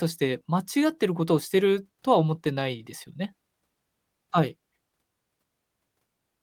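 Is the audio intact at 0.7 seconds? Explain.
Yes, the speech at 0.7 seconds is intact, with no dropout, click, distortion or other fault at that moment.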